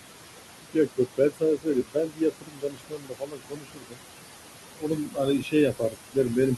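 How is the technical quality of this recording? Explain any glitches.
The recording is marred by processing faults. Noise suppression is working too hard on room noise that sits only about 9 dB below the speech.

Noise suppressor artifacts run through the whole clip. The suppressor pulls what it judges to be steady noise down by about 20 dB, band by band and frame by frame, so the background drops away in pauses and swells back under speech. Unlike a plain noise gate, which switches everything on or off, this shifts individual frequency bands.

Speech cut by the noise suppressor happens from 0.73 to 3.99 s and from 4.7 to 6.38 s. The suppressor misreads quiet parts of the speech as noise and turns them down by as much as about 22 dB. That adds up to roughly two seconds in the first stretch and about one in the second. Those parts sound swallowed or faint. This differs from dropouts, which leave abrupt silences, because here the loss follows the speech's quieter moments.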